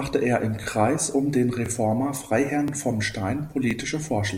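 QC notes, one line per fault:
0.64–0.66, 1.66–1.68, 2.68–2.71 and 3.71–3.73 s, overlapping chunks: the speech is processed in 1.0 s chunks that each restart 23 ms early, so that slice plays twice at every join. The first, between "er im" and "um den", is heard as a brief stutter or click repeating once per second.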